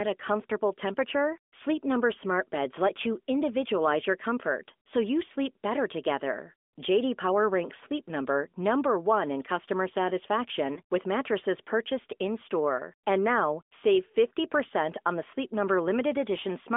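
Lost AMR speech frames at 10.74 to 10.81 s, just before "with mattresses purchased". A radio error failed a frame's checksum, so the decoder repeated its last good pitch and vocal tract settings at lower gain. This makes a brief dip or warble, which fits a single lost 20 ms frame.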